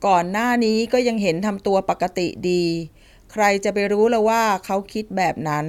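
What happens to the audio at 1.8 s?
Nothing goes wrong at 1.8 s; the speech there plays through intact, with no dropout, click, distortion or other fault.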